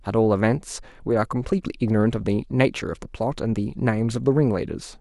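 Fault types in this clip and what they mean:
No fault types appear in the clip, so there is nothing to list or explain.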